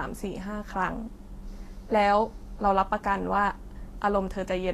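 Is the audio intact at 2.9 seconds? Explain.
No. At 2.9 s, as throughout, the speech sounds hissy and grainy, with nothing above about 14.2 kHz. This is likely Vorbis compression at a low bitrate, around 35 kbps, coarsely quantising treble detail into noise.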